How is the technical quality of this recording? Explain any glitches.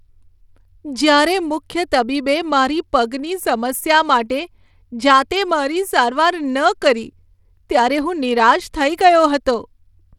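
The technical quality is poor, with codec damage plainly audible for the whole clip. The speech carries a gritty, grainy texture from start to finish. The treble sounds unstable, thinning and flickering rather than holding steady. The likely cause is Bluetooth SBC compression at a low bitrate, consistent with about 96 kbps. SBC splits the signal into a few wide sub-bands and shares out bits without modelling hearing. When bits run short, the upper bands starve and everything else is coarsely quantised. That leaves grit and aliasing on the voice.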